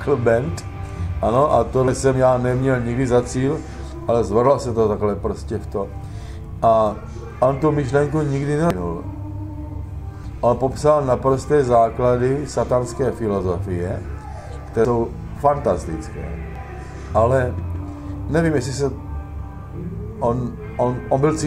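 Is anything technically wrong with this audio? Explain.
Yes. At 1.88, 8.70, 10.24, 14.85 and 16.56 s the sound jumps ahead, losing about a tenth to a third of a second each time. This is likely a dropped buffer (overrun): samples were overwritten before being read, so the two sides join with no gap.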